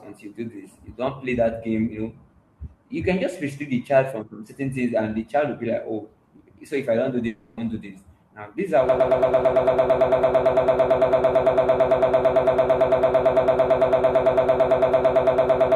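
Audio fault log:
7.27–7.60 s, long network dropout: for about 0.33 s the speech gives way to a decaying continuation of the last sound, a fading buzz that fills roughly 300 ms before the voice returns further on with that stretch simply gone. This is the sound of a receiver concealing a gap in which no audio arrived, likely a network outage, by extending what it last held rather than falling silent.
8.89 s to the end, broken-record loop: from here the audio locks onto a fragment about 112 ms long and repeats it exactly, back to back, for nearly 7 s until the clip ends, giving a rapid stuttering buzz at roughly nine repeats per second. The stream stopped delivering new material and kept replaying the last chunk it had, likely a stalled player or stream, so everything that should have followed is lost.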